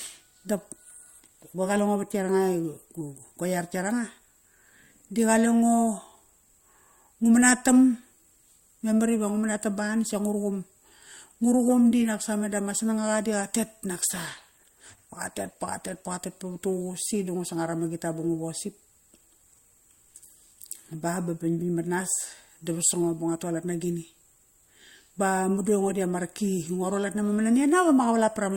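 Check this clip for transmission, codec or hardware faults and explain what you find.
One fault is present. From 14.05 to 16.05 s an adaptive stream at a lower bitrate plays: the connection slowed, so the player switched versions, which fits a drop from Opus 64 to 16 kbit/s. The speech suddenly sounds rougher, with heavier codec artefacts. On a spectrogram the change appears at once; the waveform shows no gap.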